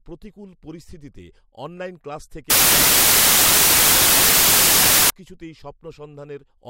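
From 2.50 s to 5.10 s, right after "প্রতিকূল পরিস্থিতিতে অনলাইন ক্লাস", the speech gives way to loud, harsh broadband noise. This is samples built from the wrong bytes: the reader assembles each sample with its bytes misaligned or swapped, so the rapidly changing low-order bits land in the most significant position and dominate every value.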